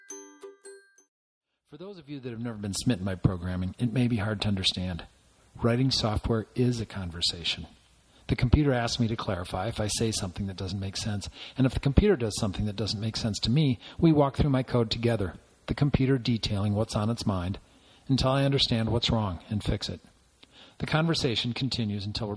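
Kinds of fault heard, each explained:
Aliasing: The audio was brought down to a lower rate, which sounds like about 22 kHz, without first filtering off the content above half that rate. Everything above 11 kHz folds back below it as false, unrelated tones, sitting roughly 30 dB under the wanted signal and giving bright sounds a gritty, metallic edge through the whole clip. On a spectrogram, energy runs hard up to 11 kHz with no roll-off, and mirrored streaks slope the wrong way beneath it.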